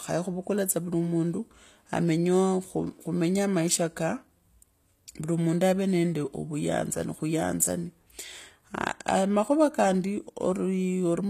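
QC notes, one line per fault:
Throughout: HE-AAC compression. The speech has a bright but synthetic top end, with s sounds turning gritty and lispy and the treble carrying a metallic sheen that does not sit naturally with the lower voice. Nothing is present above about 14.9 kHz. The likely cause is spectral band replication, which rebuilds the upper band by copying lower bands upward under a coarse envelope, so harmonics fail to line up, and the plainly audible damage points to a low bitrate near 24 kbps.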